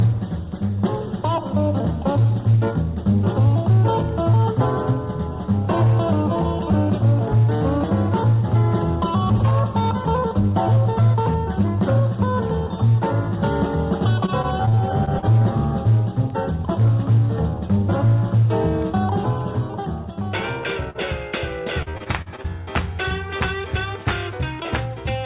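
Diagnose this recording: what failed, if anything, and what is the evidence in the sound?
Repeated packet loss (robotic sound), network stage, 14.26–15.24 s and 21.82–22.46 s: seven gaps each, up to 41 ms, patched by continuing the last sound, giving choppy texture with pieces missing.

Short concealed packet loss, network stage, 20.90–20.96 s: about 40 ms never arrived in time, and the receiver filled it by extending the preceding sound, heard as a brief smear.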